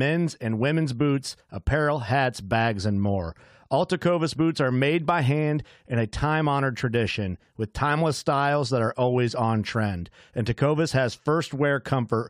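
No technical faults are audible anywhere in it.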